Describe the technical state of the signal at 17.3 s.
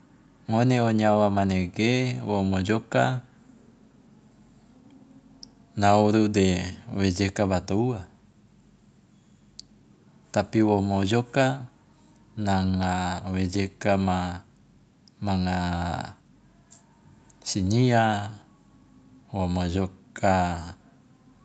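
At 17.3 s the speech is intact, with nothing wrong in the signal beyond the ordinary call-path band limit that leaves nothing above 8 kHz.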